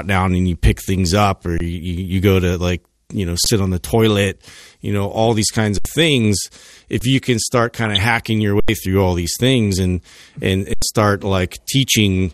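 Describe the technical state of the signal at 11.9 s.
At 11.9 s the speech sounds dull and muffled, with a gurgling, granular roughness running through it, as it does across the whole clip. This is likely MP2 compression at a low rate, which fits about 80 kbps. Starved of bits, upper sub-bands drop out and flicker back, and the bands that remain are coarsely quantised.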